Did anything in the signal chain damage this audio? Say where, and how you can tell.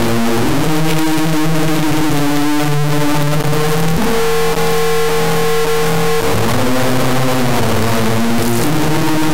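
Yes. The damage is at the sample-format conversion stage: 32-bit integer samples were read as 32-bit float, an integer read as float. The bit patterns become absurd values, so the output slams between silence and clipping throughout, giving a harsh, extremely loud buzzing square wave.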